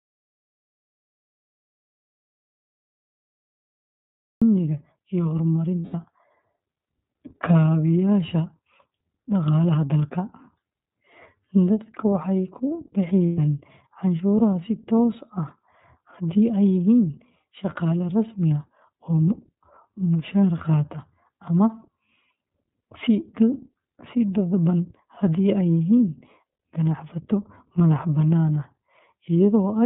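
Audio dropout to silence runs from the start to 4.42 s of this speech clip: silence without room tone, likely from an input lost while recording continued. iLBC codec damage is audible throughout, with nothing above 4 kHz and a rough, synthetic edge that fits its 13.33 kbps, 30 ms-frame mode. Lost iLBC frames at 5.79 to 5.94 s (150 ms) and 13.26 to 13.38 s (120 ms) become a held, buzzy repeat of the last pitch cycle, and the speech then recovers almost at once.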